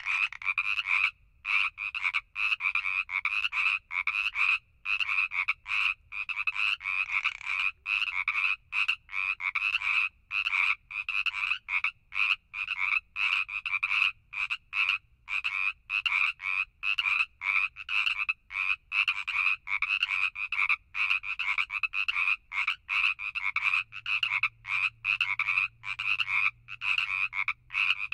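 No technical faults detected; the audio runs without dropouts, glitches or distortion anywhere in the clip.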